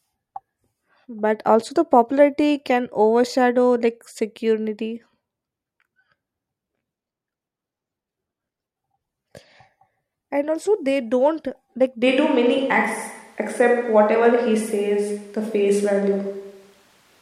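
It's a speech clip, and at 12.08 s the sound suddenly turns roomy and hollow, losing its bass, and stays that way to the end. That's a switch to a distant microphone, most likely because the close mic dropped out and the recording fell back on something further off, like a camera mic. The level barely changes, but there's now a faint room noise sitting about 40 dB below the speech.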